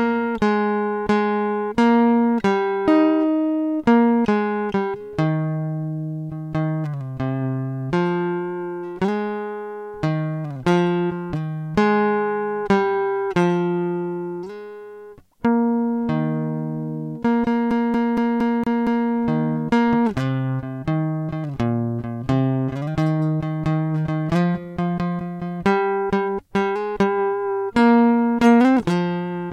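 Music, and it's fine until about 17.71 s, where it gets caught in a CD stuck on one turn and stutters until about 19.10 s. A slice of roughly 0.23 s plays six times in a row, with a tiny mute at every jump back, giving that fast, even skipping-disc rhythm. What's going on is a scratch knocking the laser back a track at the same point each revolution, so it keeps replaying that same short bit.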